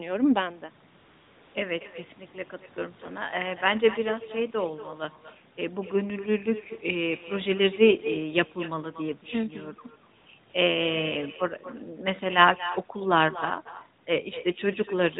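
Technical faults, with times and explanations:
Throughout: echo with no canceller. Every phrase is followed about a fifth of a second later by a fainter, thinner copy, about 14 dB down, because the far end's loudspeaker feeds its microphone unchecked. On a spectrogram each syllable has a weaker ghost trailing it, and the waveform shows small delayed repeats after each burst.
0.98 to 1.54 s, 10.18 to 10.26 s, 10.50 to 10.54 s: AMR comfort noise. In these gaps of 560, 80 and 40 ms the phone stopped sending speech frames, so the receiver filled them with steady synthetic noise that switches in and out abruptly. The spectrogram shows flat, smooth noise bands with hard edges, while the waveform looks uniform and featureless there. The audio passes through the AMR-NB narrowband codec, which fits a 12.2 kbps mode and caps everything at 4 kHz.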